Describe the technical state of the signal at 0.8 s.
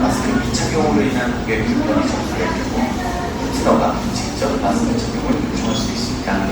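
At 0.8 s, as throughout, the sound is swirly, hollow and smeared, with blurred attacks: generation loss, likely from about seven passes through a 64 kbit/s Opus-type codec.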